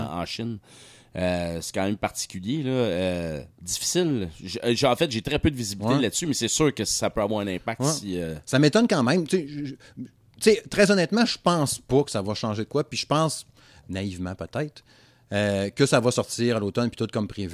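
No technical faults are audible.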